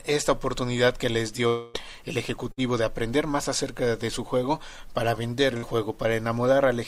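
From 1.47 to 1.76 s the sound stops advancing, most likely a long network dropout. About 260 ms of audio never arrived, and the receiver filled the whole gap by extending the last sound as a fading buzz or hiss. There is no dead silence. On a spectrogram the last frame's pattern is smeared horizontally and dims. The waveform shrinks smoothly, then the sound resumes abruptly further along, with that stretch skipped.

Two shorter bursts of packet loss occur at 2.52 to 2.59 s and 5.57 to 5.64 s. Each time about 60 ms of audio was lost or arrived too late. The receiver bridged roughly 50 ms of it by continuing the preceding sound and turning it down, so you hear a brief held buzz or hiss followed by a jump forward. A spectrogram shows a short band of repeated, fading content. The waveform shows a quick decay, then a discontinuity where playback picks up.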